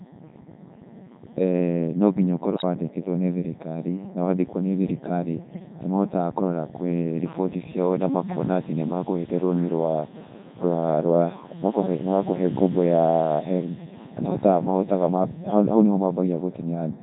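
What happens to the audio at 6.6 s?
At 6.6 s the speech is passing through a Codec 2 vocoder, which runs through the whole clip. Only pitch, voicing, energy and spectral shape survive. The voice is rebuilt from sine waves, so it sounds heavily robotic and buzzy. The damage fits Codec 2's top 3.2 kbit/s mode.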